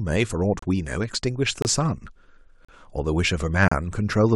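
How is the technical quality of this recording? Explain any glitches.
The recording has four brief dropouts from a gap between stream segments, at 0.59, 1.62, 2.65 and 3.68 s, each lasting 27 to 38 ms and spaced about a second apart. The timestamps of consecutive one-second segments leave a small hole, which the player fills with silence. The speech cuts out abruptly and resumes, but none of it is lost. On the waveform these appear as flat silent stretches with sharp edges, and on the spectrogram as thin, empty vertical stripes.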